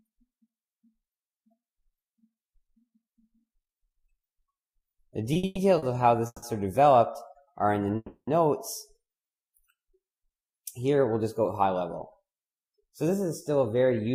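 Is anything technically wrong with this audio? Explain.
Yes, there are three kinds of network playback fault. Between 5.33 and 5.84 s there are repeated stalls (stutter): packets arrived late four times, so the jitter buffer emptied and the receiver stretched the last sound across about 230 ms, making the audio drag and stutter. At 6.26 to 6.44 s and again at 7.96 to 8.29 s there are call audio freezes, likely caused by held-up packets draining the buffer. The sound continues as a fading buzz for 160 ms and then 310 ms, ending in brief silence before resuming with nothing lost. From 12.46 s to the end, a jitter buffer speed-up clips pitch-period slices totalling roughly 150 ms, so the audio runs about 7% fast at unchanged pitch and sounds hurried.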